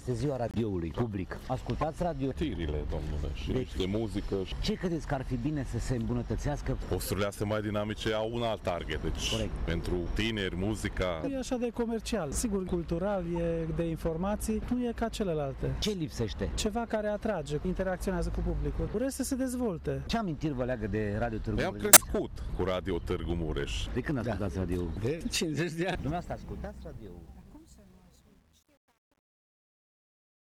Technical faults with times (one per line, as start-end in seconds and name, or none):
0.48-0.57 corrupt frame muted
1.79-1.83 corrupt frame decoded
13.36 corrupt frame decoded
21.93-22.02 corrupt frame decoded
25.96-30.46 truncation distortion on a fade